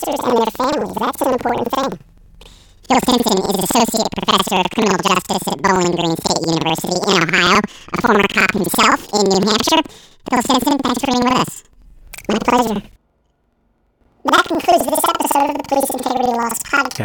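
Planar audio is read as interleaved throughout: each 85.3 ms block plays twice at double speed, raising pitch an octave with 11.7 Hz flutter.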